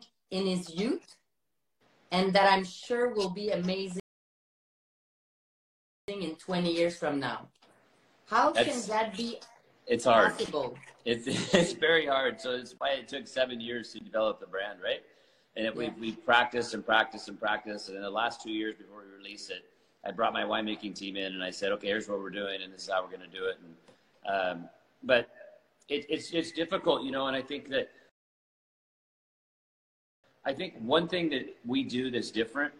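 At 4.00 s the audio drops to silence until 6.08 s, then picks up exactly where it stopped. The same happens again from 28.09 s to 30.24 s. Both gaps are rebuffering stalls: playback used up its downloaded audio and halted until more data arrived. No material is skipped or repeated, but the pauses add about 2.08 s and 2.14 s to the timeline. They are heard as abrupt dead air with clean resumption on either side.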